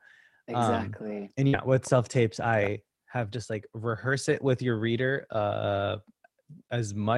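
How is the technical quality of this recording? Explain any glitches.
The recording has one glitch, a burst of packet loss from 1.47 to 1.55 s. Several consecutive packets never arrived in time, so the receiver stretched the last speech sound for about 56 ms while fading it, then jumped ahead, dropping about 60 ms of speech.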